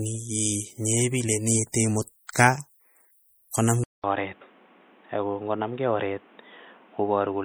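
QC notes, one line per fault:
Throughout: low-bitrate audio saved at a high bitrate. The speech carries the smeared, swirly artefacts of a heavily compressed MP3. These point to a first encode around 48 kbit/s that was likely re-saved near 256 kbit/s. The larger second encode cannot restore what the first discarded.
3.84 s to end: input switched to a poorer device. After a 200 ms silence the sound turns dull and boxy, with nothing above 3.8 kHz. A new noise floor appears about 30 dB below the speech, and loudness stays the same. This is likely a change to a narrower-band microphone or a headset call profile.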